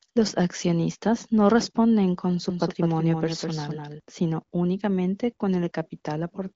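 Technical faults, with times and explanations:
2.50 to 4.00 s, doubled audio track: likely a second, slower capture path mixes in a copy about 200 ms behind and about 5 dB quieter, starting abruptly after "no responden con su".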